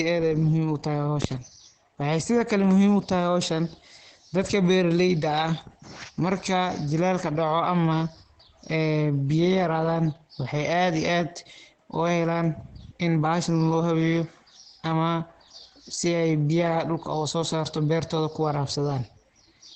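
Opus compression runs throughout, with nothing above 8.5 kHz and heavy damage. The speech sounds muffled and hoarse, which fits the encoder's speech mode at a very low bitrate, likely around 12 kbps, narrowing the bandwidth and roughening the voice.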